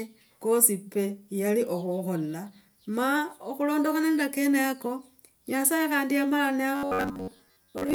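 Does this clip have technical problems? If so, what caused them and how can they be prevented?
Yes. From 6.76 s to the end at 7.95 s, new audio likely arrived too slowly, so the playback path kept filling the gap by looping the last short buffer of about 10.7 ms instead of the sound that should have come next. That is robotic sound from repeated short buffers. For most of this stretch the loops impose a buzz near 94 Hz, giving a metallic buzz that only loosely follows the original contour. Preventing it means giving the audio source enough buffering and processing headroom that data always arrives before the output runs dry.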